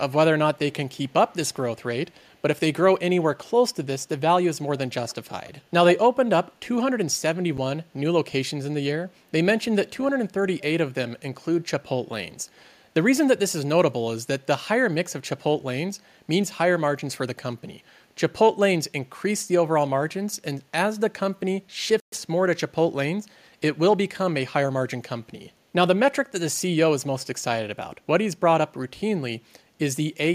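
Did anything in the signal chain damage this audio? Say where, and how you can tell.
Yes. Call processing first: there's an echo leak in this speech, a faint delayed copy trailing the talker at 0.57–1.13 s, 2.11–2.39 s and 5.08–5.32 s. It sits about 138 ms behind in the first two and about 118 ms in the third, roughly 30 dB down, closer to 40 dB down in the middle one. That's most likely a far-end speakerphone whose echo canceller didn't fully scrub what its mic picked up, so the residue came back to us.

Then playback, where there are two dropouts to pure silence before the sound picks back up: a tiny 7 ms gap at 7.57 s and a clearer 122 ms hole from 22.00 to 22.12 s. That's the signature of a Bluetooth stall. Interference held packets up, the headphone buffer ran dry, and the output simply went quiet until the resent data arrived. A wireless link hiccup is the likely cause, not anything upstream.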